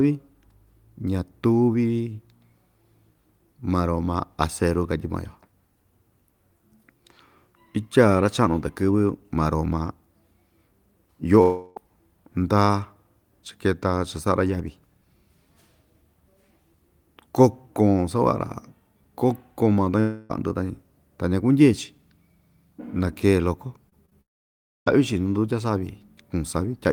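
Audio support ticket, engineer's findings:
Long network dropout, 11.41–11.78 s, 20.00–20.31 s, 24.21–24.88 s. About 0.34 s, 0.3 s and 0.66 s of speech lost. First two bridged by a fading buzzy continuation; third decays into roughly 0.63 s of silence. Likely cause: jitter buffer starved. Speech resumes further on, so it is not a muting gap.

Short concealed packet loss, 23.89 s, 24.06 s and 24.10 s, each about 20 ms missing. The decoder stretches the last sound, then blends back, giving brief smears or wobbles rather than audible gaps. This cluster leads straight into the third dropout.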